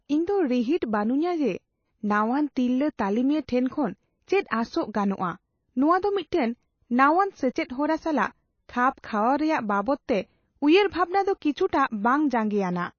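From start to finish, the speech has nothing above 6.6 kHz, and the remaining upper band sounds watery and swirly, with s sounds turning metallic and chirpy and consonant attacks smeared. This is likely MP3 compression at a very low bitrate, around 26 kbps, where the encoder runs short of bits, cuts the treble and lets weak frequency lines flicker between frames. That flickering sets it apart from a plain low-pass filter, which would dull the top cleanly without any swirl.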